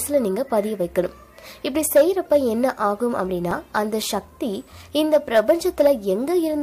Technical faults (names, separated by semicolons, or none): CD scratch ticks